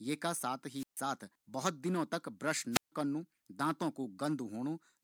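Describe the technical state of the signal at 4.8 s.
At 4.8 s the speech signal is intact, with no fault to be heard at that point.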